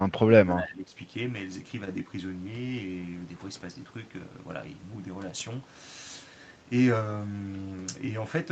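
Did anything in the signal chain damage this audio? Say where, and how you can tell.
Yes: in the call processing, an echo canceller likely mistook the talker for loudspeaker echo. The speech was suppressed in double talk, dipping about 15 dB between 0.46 and 0.95 s.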